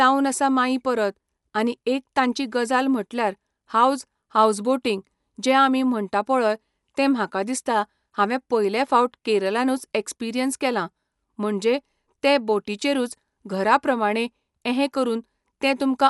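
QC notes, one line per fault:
Throughout, Dolby Digital compression: the audio was likely passed through an AC-3 style encoder starved of bits, consistent with a rate around 64 kbps. The encoder has cut the band, leaving nothing above 11.4 kHz, and has dropped detail from many frequency lines that the decoder then fills with noise. The speech therefore sounds plainly dull and closed-in, with a rough, fluttering grain clinging to the voiced tones.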